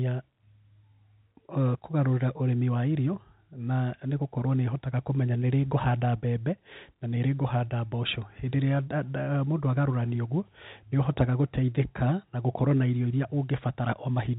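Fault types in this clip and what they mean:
No faults detected; the speech sits on a standard 64 kbps G.711 A-law telephone channel, with the expected cut-off above 4 kHz and at most a faint level-tracking quantisation hiss.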